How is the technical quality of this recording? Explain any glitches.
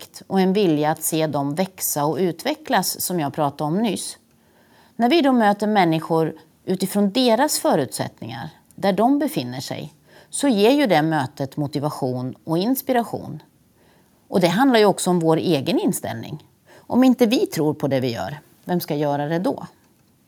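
Nothing stood out as a technical problem when listening to this speech recording, so there are no glitches to explain.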